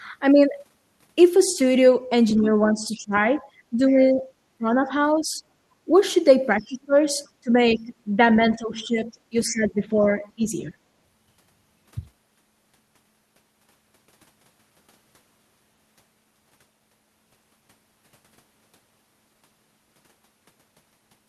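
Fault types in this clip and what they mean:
Speech suppressed in double talk: when both sides talk at once, the echo canceller likely ducks the talker's speech by roughly 10 to 25 dB, visible as waveform dips and thinned spectrogram bands.
Other side's voice leaking through: faint scraps of the far voice, likely residual echo, well below the speech, showing as brief low-level spectrogram patches near 6.6 and 9.5 s.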